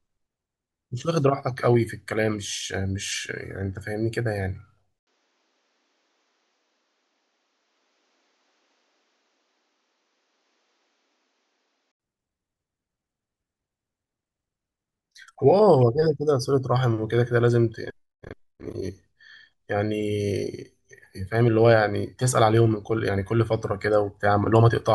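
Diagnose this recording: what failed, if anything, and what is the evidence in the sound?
The capture path most likely switched to a poorer input device between 4.99 and 12.0 s, a fault at the driver and device-routing stage rather than in the codec or network. At 4.99 s an 80 ms gap opens, then the speech returns about 10 dB quieter and duller, with nothing above 7.6 kHz, and a new background noise sits roughly 40 dB under the speech. At 12.0 s the original brighter microphone returns.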